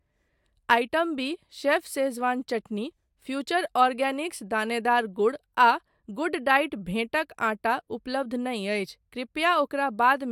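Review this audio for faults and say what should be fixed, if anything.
No faults found; nothing needs fixing.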